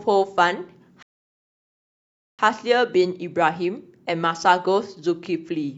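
At 1.03 s the speech halts for a rebuffering stall, going silent until 2.39 s while the player waits for more data. Unlike a dropout, nothing is skipped: the speech resumes exactly where it stopped, so about 1.36 s is simply added.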